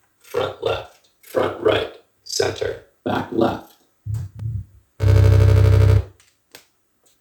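At 4.39 s the output buffer likely went unfilled in time, leaving a block of digital silence about 2.9 ms long, which fits a 128-sample block. The sound drops straight out and returns with no fade, so the gap is heard as a single sharp tick.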